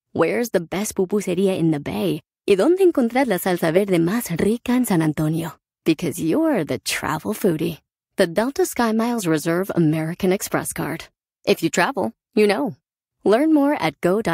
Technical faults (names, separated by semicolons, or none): none